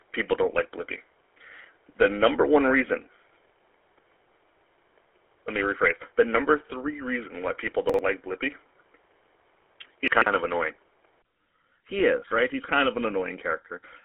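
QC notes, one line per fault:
Throughout, GSM full-rate codec. The sound has a buzzy, gravelly roughness, typical of the 13 kbps GSM full-rate codec. It rebuilds the signal from a vocal-tract model driven by thinned-out pulses. The band runs about 250 Hz to 3.4 kHz, with nothing above 3.8 kHz.
0.00 to 11.24 s, input switched to a poorer device. The opening stretch sounds dull and boxy, with a faint added noise floor and a level a few dB different. At 11.24 s, after a 20 ms gap, the tone clears up. The cause is likely a change of input microphone or headset profile.
7.90 to 7.99 s and 10.08 to 10.26 s, chunks out of order. Blocks of about 46 ms play out of sequence, one chunk late in the first case and three in the second. The hard joins at the wrong points cause a brief jumbled moment.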